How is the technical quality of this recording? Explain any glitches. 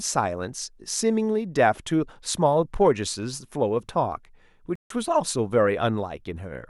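The recording has one glitch. A Bluetooth stall at 4.76 to 4.90 s drops the speech into about 150 ms of silence before it resumes, likely because interference delayed packets and emptied the headphones' buffer.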